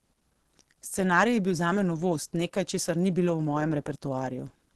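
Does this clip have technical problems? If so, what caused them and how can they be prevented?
Yes. The speech sounds hoarse and muffled throughout, with nothing above 12.1 kHz. The likely cause is Opus compression in its hybrid speech mode, which fits a rate around 16 kbps. The encoder is starved of bits, so it narrows the band and models the lower range roughly. Encoding at a higher Opus bitrate would prevent it.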